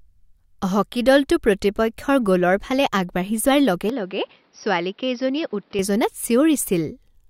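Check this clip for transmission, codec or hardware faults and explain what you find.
One fault is audible. From 3.90 to 5.79 s the speech abruptly turns duller and quieter, with nothing above 5.7 kHz and a faint new noise floor, likely from an input switch to a poorer device.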